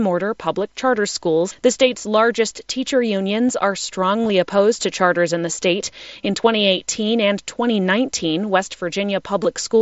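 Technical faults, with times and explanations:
4.23–4.30 s, 6.21 s, 9.43 s: concealed Bluetooth headset packet loss. Between "largest teacher unions are" and "opposed to charters in", a brief buzzy, held-tone roughness is scattered over about 75 ms with a slight warble as clean sound resumes. Just after "charters in the state", and again at 9.43 s, there are tiny glitches. Lost headset packets were patched by repeating recent waveform. The first event's scattered gaps sum to about 38 ms, and the longest single run is about 23 ms. The later two are about 15 ms each, alongside the light grain of the mSBC link.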